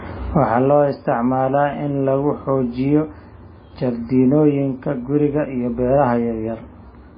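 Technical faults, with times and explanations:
Throughout, MP3 compression: nothing above 5 kHz and a heavy watery swirl on the speech, likely from MP3 starved of bits, fitting roughly 16 kbps.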